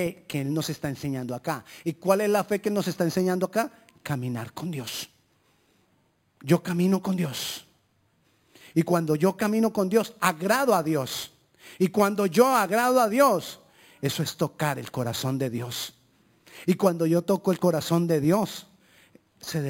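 Throughout the speech, a bright, metallic fizz sits above the voice, rising and falling with its loudness, and the lowest layer of that fizz moves opposite to the pitch. This is imaging from sample-and-hold upsampling. The rate was raised by simply holding each sample, with no smoothing filter, so mirrored copies of the spectrum remain. The first copy spans about 5.5 to 11 kHz at roughly 18 dB below the signal, which fits an original rate near 11 kHz.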